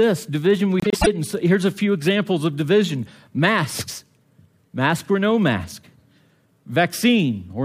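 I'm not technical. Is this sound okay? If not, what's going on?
No. From 0.80 to 1.08 s, just before "it and so here's", the frames are out of order: two pieces, each about a tenth of a second, play swapped, giving a brief garbled flutter. Unlike a dropout, nothing goes missing.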